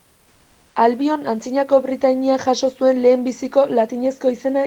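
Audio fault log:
0.00–0.75 s, comfort noise in place of the background: a smooth, featureless hiss, about 1 dB quieter than the textured room noise that follows. It is likely discontinuous transmission filling the pause, and unlike a noise gate it never drops to silence.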